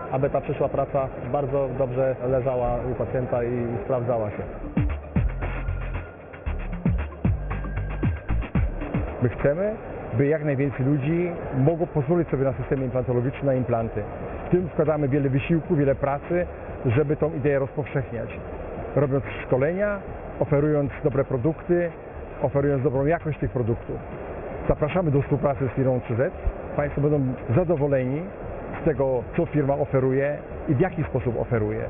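Aliasing runs through the whole clip. The sound was resampled downward without a proper low-pass filter first, which fits a drop to a 6 kHz rate. Content above 3 kHz folds back as unrelated tones, roughly 20 dB down, giving a gritty, metallic edge.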